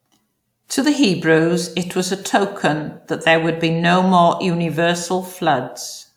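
There are no technical faults to describe in this speech, at any point in time.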